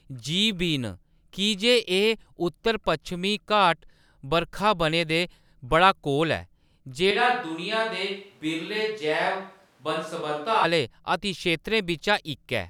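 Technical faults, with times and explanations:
7.11–10.64 s, switch to a distant microphone: the speech abruptly turns roomy and hollow, loses low end, drops roughly 5 dB, and carries a noise bed only some 35 dB below it, then snaps back at 10.64 s. A mic farther away, likely the camera's, picks up more reflections and ambient noise relative to the source. On the waveform the envelope steps down with blurred decays; the spectrogram shows thinner bass, smeared reverberant tails and a lifted noise floor between words.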